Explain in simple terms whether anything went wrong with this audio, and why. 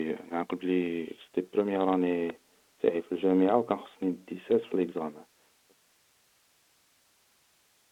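Nothing went wrong here; the recording has no faults.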